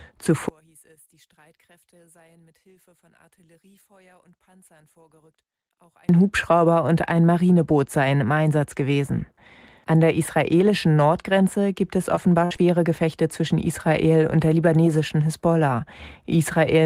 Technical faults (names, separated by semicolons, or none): one channel inverted; short concealed packet loss; burst of packet loss